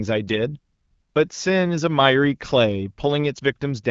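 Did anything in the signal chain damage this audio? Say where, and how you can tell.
No, nothing in the chain damaged this speech: it has passed through an AMR wideband (HD Voice) link at 12.65 kbit/s, which leaves only the light coding texture expected at that rate and nothing above 7.5 kHz.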